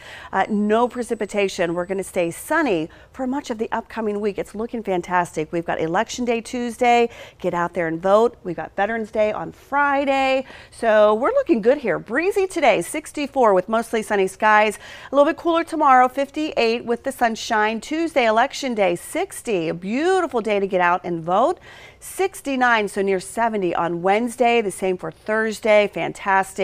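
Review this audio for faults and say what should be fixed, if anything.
USB whine runs from 0.42 to 2.62 s as a steady 8 kHz tone, roughly 40 dB below the signal. The 125-microsecond microframes of the USB bus leak in through power or ground. Unlike mains hum, the pitch sits high and fixed at 8 kHz. Power the interface separately or add a USB isolator.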